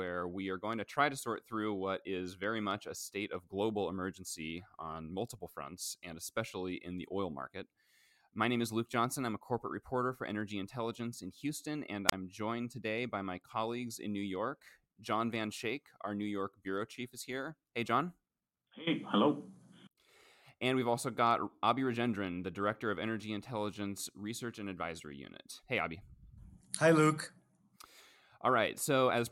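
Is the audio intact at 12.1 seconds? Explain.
No. From 12.07 to 12.12 s a wireless microphone squelch dropout occurs. The radio signal fades, hiss rises briefly, and then the receiver's squelch mutes the output for about 28 ms before speech returns on "joined today by my". That lead-in hiss sets it apart from a clean digital dropout.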